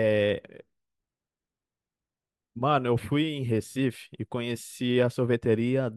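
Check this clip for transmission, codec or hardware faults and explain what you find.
Nothing in this bit of speech gives me anything to flag on the transmission, codec or hardware side.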